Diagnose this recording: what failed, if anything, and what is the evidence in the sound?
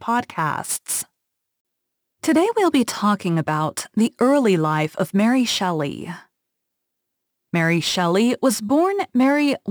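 A crude rate conversion failed in the sample-rate conversion stage, throughout the speech. Each output sample simply took the nearest input sample, dropping samples in a repeating pattern; the grid of drops fits a 48 kHz to 44.1 kHz change. The resulting error, around 25 dB below the speech, is a gritty, inharmonic fizz that rides on loud and high-frequency sounds. Unlike codec artefacts, it doesn't swirl or smear, and it is absent in silence.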